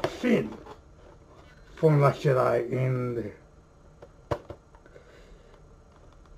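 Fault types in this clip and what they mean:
No fault types are present in this clip, so there is nothing to list or explain.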